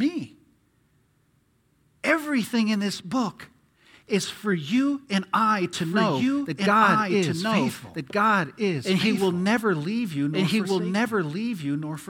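From 5.73 s to the end, a doubled audio track appears. A second full-level copy trails by about one and a half seconds, starting abruptly, likely from a slower capture path.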